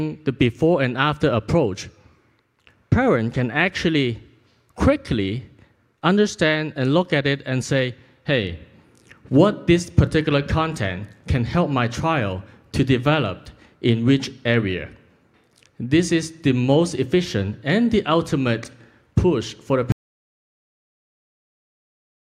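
At 19.92 s the sound cuts to silence through the end, an audio dropout to silence, likely a lost input; the waveform flatlines and the spectrogram goes blank.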